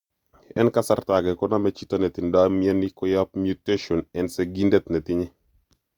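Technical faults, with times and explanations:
0.57–0.59 s, loud pop: a likely voltage spike from a plug, switch or static discharge enters the signal, producing one sharp pop a few decibels above the speech.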